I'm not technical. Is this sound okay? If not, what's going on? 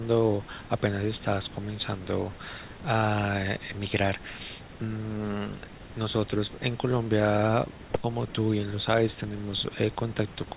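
Yes, no faults are audible in this speech: it has the muffled, phone-like tone of an ordinary call line, which passes nothing above 4 kHz, and that is expected.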